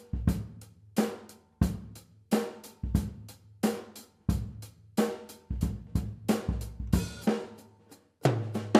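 Nothing is technically wrong with this audio.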